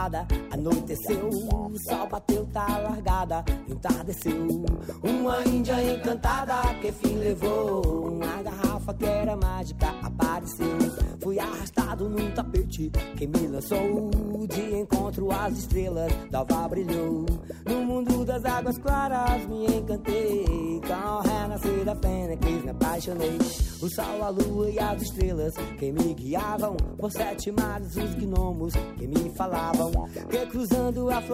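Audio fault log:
0.14–30.77 s, word clock ticks: an unlocked receiver drops or repeats one sample about every 0.7 s, giving around fifty sharp, uneven clicks that show as evenly spaced vertical spectrogram lines.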